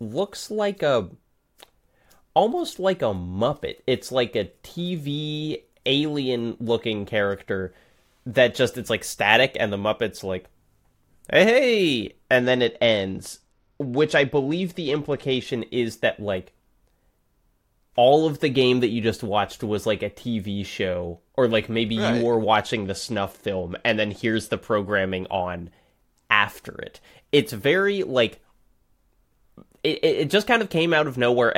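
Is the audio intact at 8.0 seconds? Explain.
Yes, the speech at 8.0 seconds is intact, with no dropout, click, distortion or other fault at that moment.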